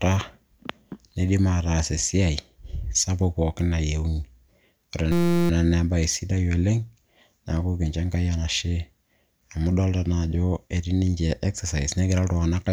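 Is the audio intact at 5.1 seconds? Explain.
No. A system hang loop runs from 5.12 to 5.50 s. The system froze while the hardware kept replaying one 5.8 ms slice of speech, which fits a 256-sample buffer. It repeats 65 times, heard as a steady buzz at 172 Hz.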